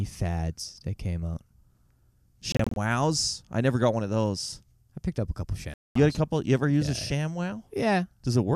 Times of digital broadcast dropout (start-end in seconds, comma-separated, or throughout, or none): 2.52-2.77, 5.74-5.96